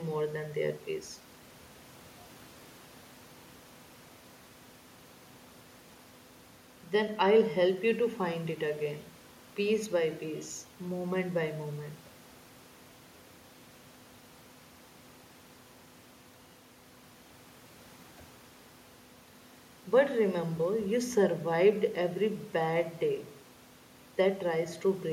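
No technical faults turn up anywhere in this speech recording. There is nothing to mark at any point in the audio.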